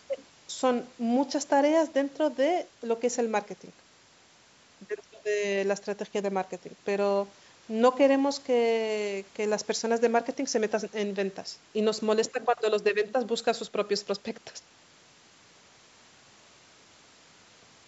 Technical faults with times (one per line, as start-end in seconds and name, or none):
none